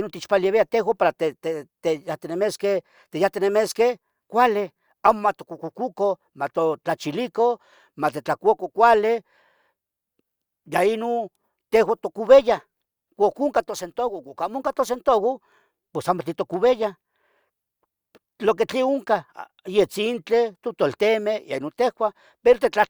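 No technical faults can be heard anywhere in this speech recording.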